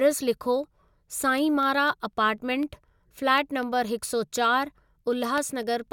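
From 0.13 s to 5.88 s the speech is interrupted by periodic USB or driver dropouts. Every 0.25 s a background task stalls the audio path, and a sliver of signal, a fraction of a millisecond, is replaced by silence, about twenty times in all. Each gap is heard as a small regular tick, audible only while sound is present. On a waveform these show as tiny notches of silence. On a spectrogram they appear as thin, evenly spaced vertical broadband lines.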